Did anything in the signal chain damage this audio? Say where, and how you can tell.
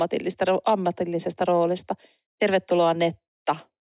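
No, nothing along the signal chain has left an audible mark on this speech recording, and the signal shows no sign of damage at any stage.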